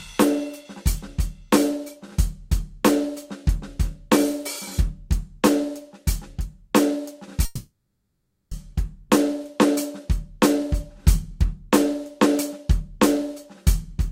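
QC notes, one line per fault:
7.45–8.53 s, call audio freeze: the music's last sound smears into a fading buzz, then 0.54 s of silence, and resumes where it stopped, 1.06 s late with nothing lost, likely from an emptied jitter buffer. Spectrogram: smeared bands fading into a blank gap.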